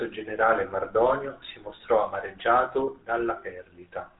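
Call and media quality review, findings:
GSM full-rate codec, throughout the speech. Buzzy, gravelly roughness, plainly audible; nothing above 4 kHz. Component: GSM full-rate speech coder, consistent with 13 kbps. Vocal-tract model driven by sparse regular pulses discards fine excitation detail.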